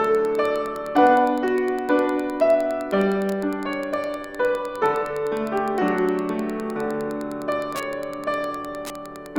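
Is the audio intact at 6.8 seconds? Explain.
No. Wi-Fi interference runs through the whole clip, including 6.8 seconds. A nearby Wi-Fi radio's beacon, every 102.4 ms, is rectified by the audio circuit. It sounds like steady ticking about ten times a second, roughly 25 dB below the main sound.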